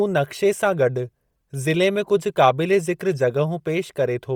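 From start to finish the speech has a breathy, grainy edge, with hiss-like fizz standing in for the real top end. That's likely Bluetooth LC3 compression squeezed hard, which fits about 32 kbps in 10 ms frames, with upper detail swapped for filled-in noise.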